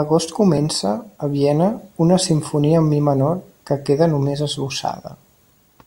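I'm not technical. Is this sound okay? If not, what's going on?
No. At about 0.58 s there is a tiny skip where the speech jumps forward. This is an overlap between stream segments. The audio arrives in 2-second pieces, two pieces claimed the same moment, and the player cut out a sliver of real sound.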